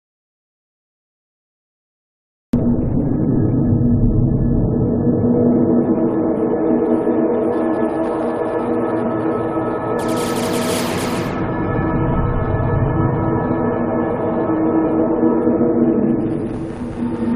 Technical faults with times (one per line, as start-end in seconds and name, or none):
0.00-2.53 audio dropout to silence